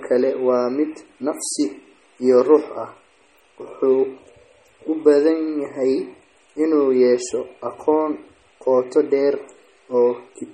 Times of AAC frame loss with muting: none

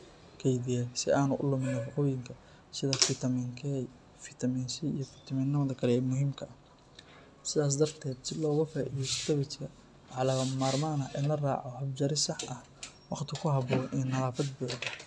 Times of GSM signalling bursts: none

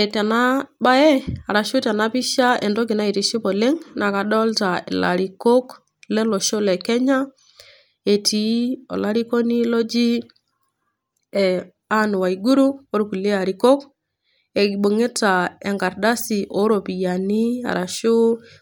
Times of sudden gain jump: none

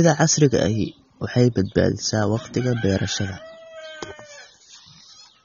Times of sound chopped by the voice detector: none

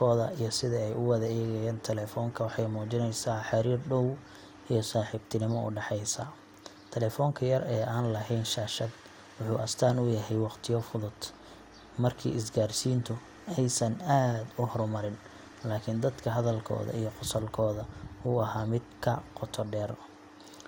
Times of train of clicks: none

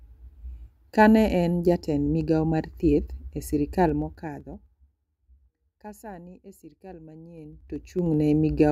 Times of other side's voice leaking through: none

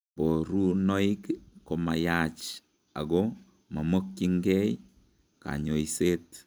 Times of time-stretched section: none

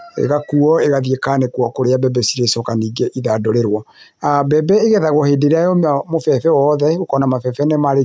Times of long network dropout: none

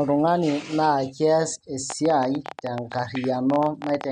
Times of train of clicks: 1.90-4.05

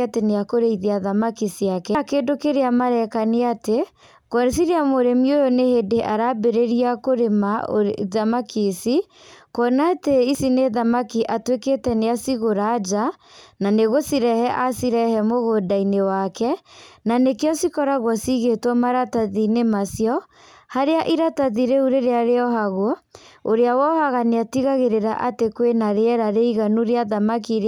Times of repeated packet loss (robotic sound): none

